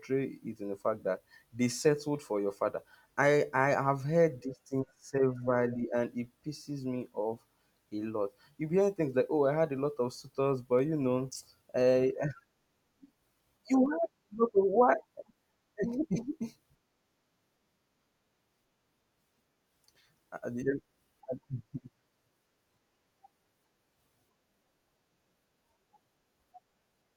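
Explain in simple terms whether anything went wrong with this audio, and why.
Periodic USB or driver dropouts run from 9.77 s to 26.17 s: about fifteen ticks, spaced evenly about every 1.02 s, heard only while the person is talking. Something in the computer likely stalled the USB connection or audio driver at a steady rhythm. Each time, a tiny sliver of sound, a small fraction of a millisecond, was simply skipped, and that abrupt jump in the speech is what you hear as a tick.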